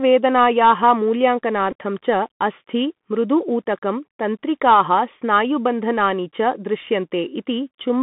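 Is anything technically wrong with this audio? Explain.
Yes, there are two faults. Bluetooth CVSD headset codec, throughout: the audio is confined to roughly 150 Hz to 3.6 kHz, which fits a 64 kbps CVSD link. Each sample is coded as a single up-or-down bit with an adapting step size. Fast high-frequency movement outruns that step, so the damage is plainly audible as a narrow, gritty, scratchy quality over everything.

Bluetooth headset packet repeated, at 1.71 to 1.74 s and 7.73 to 7.77 s: voice packets were lost and the previous packet's bits were decoded again. The first gap is 11.2 ms. The second spreads 26.2 ms of loss across 45 ms, with the longest run about 10 ms. Each run produces a brief buzz near 267 Hz.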